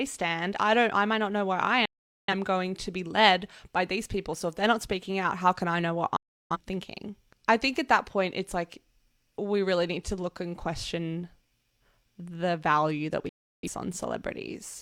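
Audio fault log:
1.85–2.34 s, 6.16–6.57 s and 13.29–13.69 s, digital broadcast dropout: the audio snaps to silence with a roughly 3 ms fade after "not know where I", "can I know what" and "the value that", for about 430, 340 and 340 ms. That's the receiver muting on bad or missing frames, likely around ten, eight and eight of them. The missing audio is simply gone, and it picks back up at "going to be led" and "thinking I think at".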